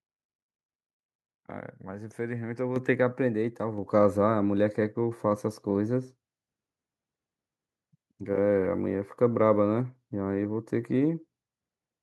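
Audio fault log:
2.76 s and 3.78 s, microphone volume stepped up: speech and background noise jump together, about 7 dB then about 3 dB, as the input gain is raised in single steps rather than ramped smoothly.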